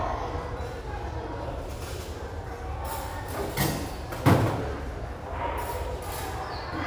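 Throughout, crude rate conversion, likely from 32 kHz up to 48 kHz by linear interpolation, leaves a gritty inharmonic fizz roughly 25 dB down, seen as faint mirrored spectrogram images tracking loud highs.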